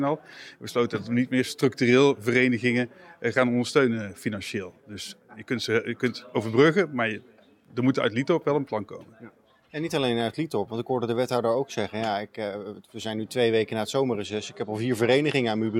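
A Bluetooth SBC bit pool drop hits the last stretch of the audio, from 14.26 s to the end at 15.8 s: the link congested and the sender cut the SBC bit pool to keep the stream alive, and the sound points to it roughly halving, to around 105 kbps. Starved of bits, the upper sub-bands lose their allocation and the remaining bands are quantised coarsely, so the treble goes dull and a gritty noise rides over the audio through the final second and a half.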